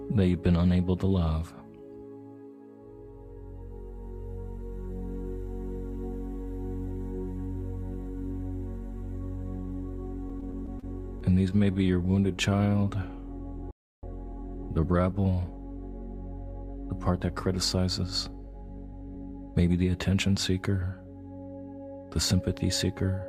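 From 10.29 to 10.84 s and again from 11.20 to 12.15 s the audio shows repeated stalls (stutter): packets arrived late, the jitter buffer kept running dry, and the receiver stretched the last sound to bridge each gap. The result is a halting catch across five and then eight tiny gaps, the longest 31 ms, with nothing actually lost.

From 12.21 to 15.21 s a jitter buffer slow-down follows. To rebuild its reserve, the receiver repeated single pitch periods, adding about 201 ms, so the sound plays at 93 % speed. Unlike the stutter, this is a drag with drawn-out sounds and unchanged pitch rather than separate hitches.

Inside that stretch, from 13.71 to 14.03 s, the output drops to silence for about 318 ms, a playback stall. The player most likely ran out of data or had its thread blocked. It differs from the stutter because the gap is a clean dead stop rather than a sustained sound.

From 17.10 to 19.85 s a jitter buffer speed-up sets in. 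The receiver held more audio than it needed and trimmed out short pitch periods, about a fifth of a second in total, so the sound runs at 107 % speed. It is hurried at the same pitch, the opposite of the earlier slow-down.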